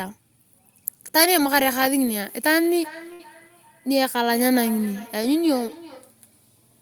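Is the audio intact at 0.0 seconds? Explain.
Yes, the audio is intact at 0.0 seconds, with no fault present at that moment.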